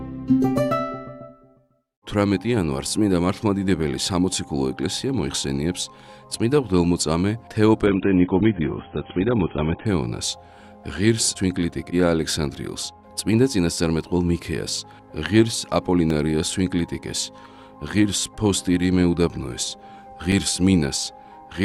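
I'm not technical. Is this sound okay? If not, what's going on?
No, there are two problems. From 7.86 to 9.86 s you get an adaptive stream at a lower bitrate. The connection slowed, so the player briefly switched to a cheaper version. Everything above about 3.8 kHz disappears, so it turns dull and a bit watery, then snaps back.

There's also a block of digital silence at 16.10 s and again at 20.32 s. Each time the sound drops out for about 3 ms, likely because the program didn't refill its output buffer in time. The abrupt cut and restart comes across as a small tick.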